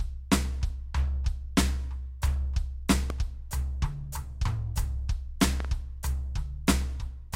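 A sudden voltage step, likely from a plug, switch or static discharge, entered the signal path, producing a loud pop at 3.10 to 3.12 s and a double pop at 5.60 to 5.67 s, each about 10 dB above the music, which continues underneath.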